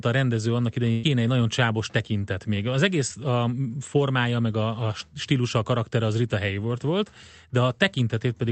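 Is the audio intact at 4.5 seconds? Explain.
Yes, the speech at 4.5 s is intact, with no dropout, glitch or distortion at that moment.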